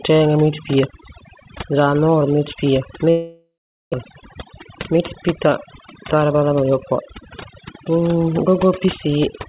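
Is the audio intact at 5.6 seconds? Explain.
No. At 5.6 s the speech is inside a jitter buffer speed-up that runs from 4.04 to 6.72 s. The receiver had too much audio queued. It cut many short pitch-period pieces, about a fifth of a second in all. Speech runs about 8% fast at unchanged pitch and sounds hurried.

Overdone noise removal is also present here, as it is throughout. The noise reducer pushes bands near its noise estimate far down. Quiet speech detail goes too. The background drops and breaks up into twinkling specks, all within a band that stops at 4 kHz.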